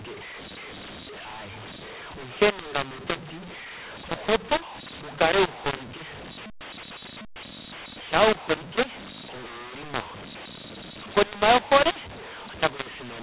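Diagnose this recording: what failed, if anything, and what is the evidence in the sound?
The codec stage failed at decode: the G.711 stream was encoded with A-law but decoded as mu-law, a mu-law and A-law mix-up present for the whole clip. Each 8-bit code is expanded on the wrong logarithmic curve, so sample levels are scrambled, some too loud and others too quiet, with the smallest values pushed well above zero. The speech sounds harsh and gritty throughout, and the gaps between phrases fill with hiss, all inside the 4 kHz telephone band.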